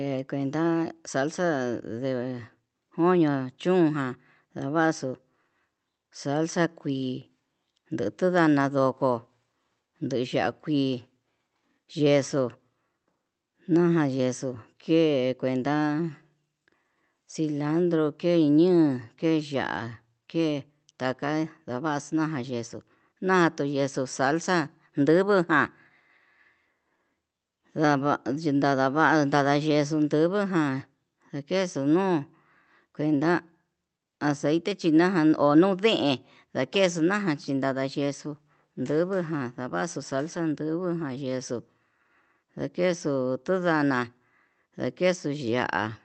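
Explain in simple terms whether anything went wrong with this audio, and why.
Nothing went wrong with this speech recording; it simply came through an ordinary internet call connection that was working the way it should.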